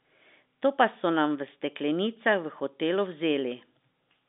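There are no technical faults to describe at any point in this speech, which comes over the narrow band of a telephone line with nothing above 3.7 kHz.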